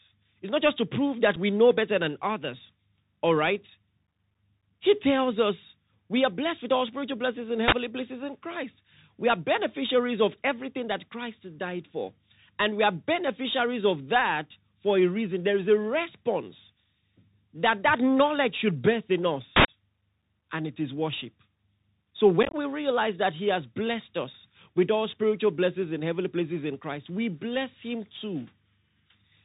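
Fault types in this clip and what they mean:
Bluetooth CVSD headset codec: The whole clip went through the narrowband headset codec, which tracks the waveform one bit at a time with an adapting step. It leaves nothing above 4 kHz, scratchy s sounds and granular hiss. A spectrogram shows a hard ceiling near 4 kHz and grainy noise below it.
Unconcealed Bluetooth headset packet loss: Lost voice packets became abrupt holes. At 1.36 s, between "just to prove that" and "we know better than", a gap of about 7.5 ms opens. From 22.43 to 22.55 s, about ten packets drop out, with gaps up to 22.5 ms, so the sound crackles. The waveform shows sharp-edged flat notches.
Uninitialised buffer: Memory was played before audio was written into it, so leftover data came out as loud digital noise. At 7.68 s, after "all spiritual blessings and", the burst lasts about 43 ms; at 19.56 s it lasts about 85 ms. Both appear as tall blocks with sheer edges.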